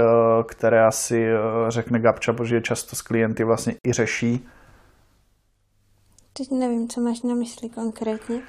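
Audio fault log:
3.79–3.84 s, Bluetooth stall: after "často s klienty vlastně" the speech drops to silence for about 56 ms, then resumes at "i řeší", likely because interference delayed packets and drained the headphone buffer. The waveform shows a flat gap; the spectrogram shows a sharp-edged blank vertical band.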